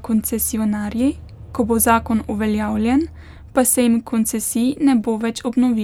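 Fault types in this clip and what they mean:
No fault types can be heard in this clip.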